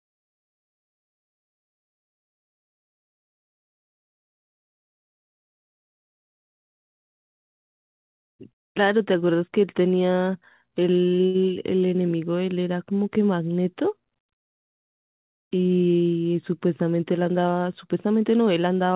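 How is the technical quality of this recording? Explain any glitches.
The recording has three glitches from the receiver's timing control. It came through a narrowband call path with nothing above 4 kHz, which fits G.711 mu-law at 64 kbps.

Jitter buffer speed-up occurs from 8.53 to 9.30 s and again from 17.88 to 18.68 s. The buffer held too much audio, so the receiver cut out short pitch-period pieces repeatedly. Speech runs 8% and then 10% fast at unchanged pitch, losing roughly 70 ms and then about a tenth of a second. It sounds hurried.

A short stall from a late packet occurs from 11.26 to 11.37 s. A packet arrived late and the buffer ran dry. The receiver stretched the last sound for 81 ms, then resumed without losing anything. You hear one sound held too long, with a faint buzz or dip.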